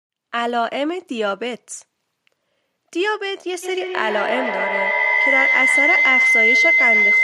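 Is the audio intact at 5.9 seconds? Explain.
No. A feedback howl runs from 3.63 s to the end of the clip, so 5.9 s falls inside it. Sound from a loudspeaker is re-entering a microphone and gaining level on each trip, building into a tone around 2 kHz, with repeats about 150 ms apart and peaking about 6 dB above the speech.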